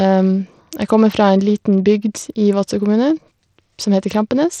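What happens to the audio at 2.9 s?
At 2.9 s the speech has a gritty, grainy edge with treble that flickers and thins, and the whole clip sounds this way. The likely cause is Bluetooth SBC compression at a small bit pool, consistent with about 80 kbps. Its coarse sub-band quantisation starves the upper bands, and nothing remains above 18.4 kHz.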